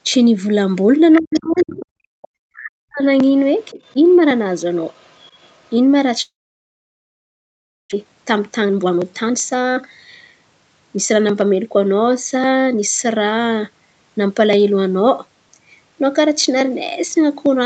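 From 1.13 to 1.86 s a second, quieter voice sits under the speech about 15 dB down. This is the other side's voice leaking through, likely because the far end played on a loudspeaker and the echo canceller left a residue in the microphone signal. Over nearly the same stretch, 1.2 to 1.86 s, the main speech sinks, at its deepest by roughly 35 dB across about 0.7 s. That is speech suppressed in double talk: with both sides active, the canceller likely could not separate its own talker from the echo and pulled everything down. A network fault would remove the sound outright. Here the near talker fades in pieces while the far voice is present.

At 2.14 to 2.22 s the room sound itself drops by about 37 dB for roughly 70 ms and then returns. This is background gated by the echo canceller, which clamped the microphone while the loudspeaker was playing. It differs from double-talk suppression because it hits the ambient floor in a gap rather than the talker mid-phrase. 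A faint echo fragment follows at 2.22 to 2.28 s, around 30 dB down.

Double-talk dips recur at 2.53 to 3.03 s, deep at roughly 40 dB over half a second, and briefly at 3.7 to 3.79 s, a shallower dip of about 15 dB. Weak leakage, around 35 dB below the speech, is audible at 3.61 to 3.94 s and 4.94 to 5.74 s.

From 6.21 to 7.94 s comes a long network dropout. The last sound is stretched into a fading buzz, then near-silence holds for about 1.6 s. The audio resumes with roughly a second of material likely never delivered. Unlike echo-canceller gating, nothing from the room survives through the gap, and the speech does not pick up where it left off.

Right after, from 7.95 to 9.81 s, the jitter buffer speed-up drains the delay built up in the outage. Short pitch-period slices are cut repeatedly, so the talk runs about 22% fast, losing roughly 0.4 s, while pitch stays unchanged. Milder speed-ups follow at 10.96 to 13.60 s, about 6% fast, and 14.17 to 15.07 s, about 8% fast. 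This hurried rhythm without a pitch shift separates it from resampling errors. Throughout, the Opus call path limits the audio to 8 kHz.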